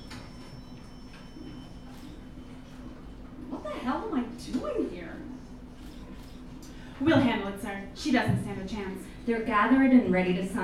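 Nothing in the audio stands out as a technical problem, so there's really nothing to flag here.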